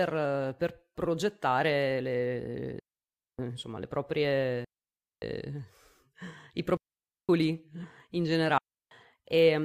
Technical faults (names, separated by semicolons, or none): digital wireless dropout